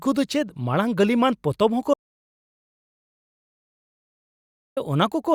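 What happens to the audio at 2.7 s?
An audio dropout to silence runs from 1.94 to 4.77 s: the input was likely lost, so the speech cuts to silence with no room tone for 2.83 s.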